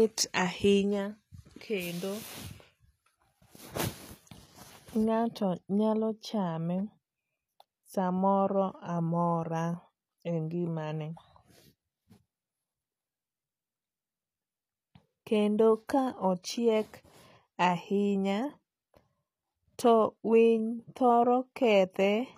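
A speech clip carrying plainly audible HE-AAC compression throughout, likely from a low-bitrate encode near 24 kbps. The treble above the crossover is spectral band replication: bright rather than dull like a plain low-pass, but s sounds turn gritty and lispy, with nothing above 14.9 kHz.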